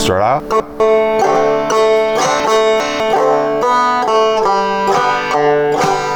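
From 0.4 to 0.8 s, and again from 2.4 to 3.0 s, 200 ms chunks play out of order, arriving one and then two chunks late. Nothing is lost, but the misplaced audio is heard as a jumbled stretch.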